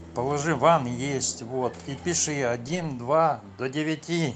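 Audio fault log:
0.75 s and 2.67–2.85 s, lost packet rebuilt from error correction: at 0.75 s a single 20 ms frame, and from 2.67 s about 100 ms of audio (consistent with five separate 20 ms packets), were played from the low-bitrate redundant copy that Opus carries in the following packet, so nothing drops out. Those stretches sound coarser and noisier than the 40 kbps, 8 kHz-bandwidth Opus audio around them because the backup copy is coded far more sparsely.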